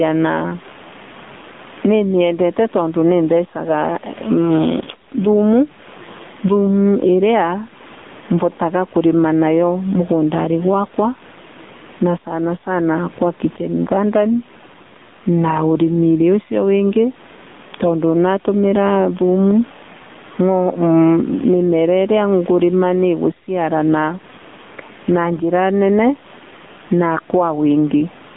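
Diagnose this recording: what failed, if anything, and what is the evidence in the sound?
Gain pumping runs throughout, with a gain swing of around 15 dB. The waveform's envelope breathes. The likely cause is a fast limiter reacting to input gain set far too high.

The AMR narrowband mobile codec stage is audibly damaged throughout. A spectrogram shows a hard ceiling near 3.7 kHz, with the band confined to roughly 150 Hz to 3.6 kHz. The buzzy, synthetic texture fits a 7.4 kbps mode.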